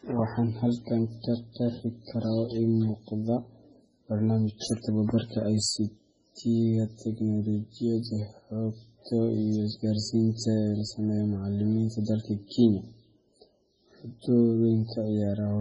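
MP3 compression runs throughout the speech, most likely from an encoder starved of bits, which fits a bitrate near 16 kbps. With so few bits, nothing survives above 10.3 kHz and weak frequency lines drop in and out between frames, leaving heavy watery, swirling damage.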